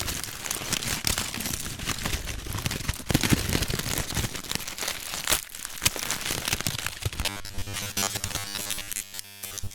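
Robotic sound from repeated short buffers hits this recording of sounds from 7.23 s to 9.75 s: a rigid 100 Hz buzz, likely from a 10 ms block repeating for roughly 70 percent of that stretch.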